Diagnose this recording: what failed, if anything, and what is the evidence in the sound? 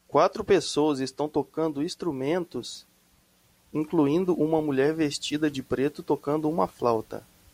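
Nothing in this speech recording points to a failure at any stage of the chain. No event in the sound calls for a diagnosis.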